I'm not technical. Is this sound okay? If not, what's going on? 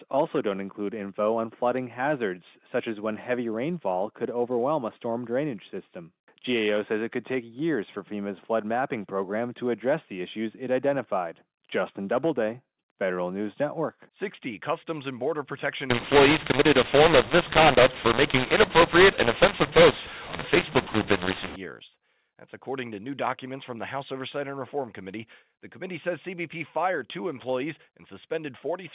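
No. Mu-law and A-law mixed up, 15.90 to 21.56 s: the telephone-coded speech was decoded with the wrong rule, scrambling loudness so it turns harsh, and even pauses hiss.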